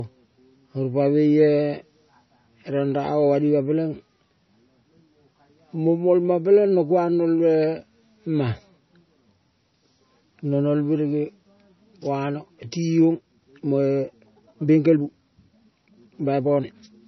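Right from the start the speech has watery, swirly smearing, likely heavy MP3 compression at a bitrate as low as 24 kbps. From 13.1 s to the end the pace jumps to about 1.35 times speed with unchanged pitch, sounding rushed, likely a time-stretched section.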